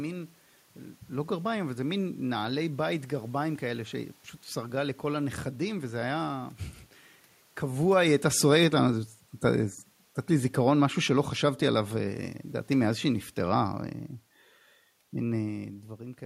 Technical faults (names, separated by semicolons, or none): automatic gain falling